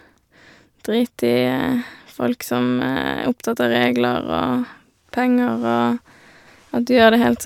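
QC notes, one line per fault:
No technical faults are audible in this speech recording.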